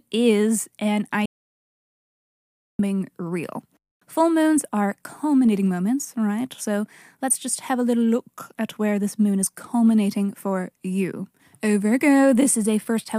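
At 1.26 s, just after "is an", the speech cuts to total silence until 2.79 s. This is an audio dropout to silence. About 1.5 s is lost. No room tone remains. The input was likely disconnected or muted while recording continued.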